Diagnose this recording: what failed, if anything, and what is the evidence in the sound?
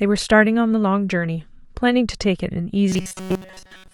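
Robotic sound from repeated short buffers, 2.89 to 3.93 s: speech locks into a rigid 188 Hz buzz, likely a starved buffer looping 5.3 ms chunks, unlike wandering codec warble.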